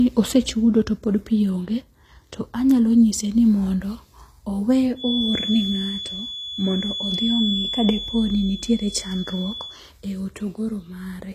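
From the start, the speech carries the artefacts of a very low-bitrate encode, and nothing is present above 14.9 kHz. The file is an MP3 at a generous rate, but that cannot restore what was removed earlier, so this is likely low-bitrate audio saved at a high bitrate. The artefacts point to something like 24 kbit/s HE-AAC as the first stage, with a later re-encode near 192 kbit/s adding little of its own.

From 4.94 s to 9.80 s, a thin, steady tone at 3.4 kHz sits behind the speech, roughly 10 dB below it, swelling and fading slowly in level without ever building up. This is a feedback whistle: the loop from loudspeaker back into the microphone was likely held right at its threshold, so one frequency kept ringing without running away.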